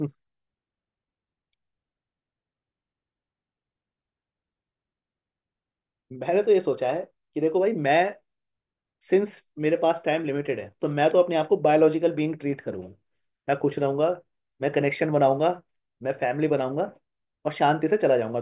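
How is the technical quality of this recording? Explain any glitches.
The technical quality of this recording holds up, with no glitches to explain.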